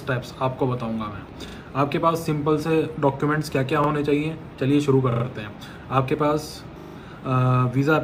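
Four times, new audio failed to reach the output in time, so the device replayed its last buffer. This is a repeated buffer fault. It happens at 1.48 s (two extra plays), 3.84 s (one), 5.12 s (three) and 6.8 s (four). Each time, a slice of sound that fits a 40 ms buffer repeats with hard joins, heard as a brief stutter.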